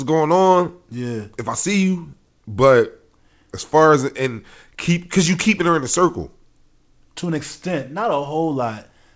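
Nothing goes wrong in this speech; it simply comes through a call link working as it should, with nothing above 8 kHz, which fits a wideband call codec such as G.722 running at around 64 kbps.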